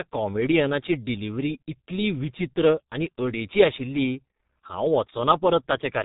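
Throughout, heavy G.723.1 codec damage cuts everything above 3.8 kHz; unlike a plain band-limit, its sluggish voice model leaves consonants smeared and hoarse.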